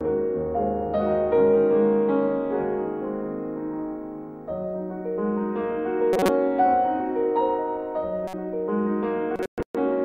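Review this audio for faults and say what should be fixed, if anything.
Three corrupt frame decoded faults occur, at 6.13 to 6.29 s, 8.27 to 8.34 s and 9.36 to 9.46 s. Damaged compressed frames were played anyway, so misread gains spray energy into wrong frequencies. Each is a short squeak or noise burst. The first is loudest, peaking near -5 dBFS. Add error detection so bad frames are concealed, not decoded.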